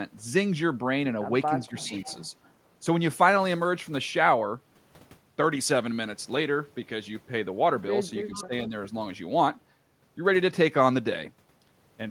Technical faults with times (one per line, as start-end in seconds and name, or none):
1.64-2.16 echo leak
1.67-2.00 speech suppressed in double talk
8.34-8.44 echo leak
8.46-8.73 speech suppressed in double talk